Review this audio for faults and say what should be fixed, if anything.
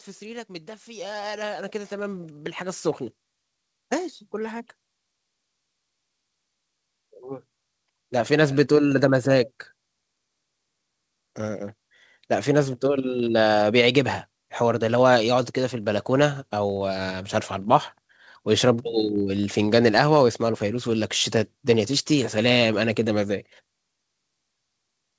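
Automatic gain rising runs from 0.46 s to 12.31 s. The gain control judged the input too quiet and kept raising its gain, by about 17 dB overall, so the level climbs steadily for nearly twelve seconds. The background swells along with the speech, which separates this from a talker moving closer to the microphone, where only the voice would grow. Setting an adequate input level beforehand, or capping the gain control's range, would prevent it.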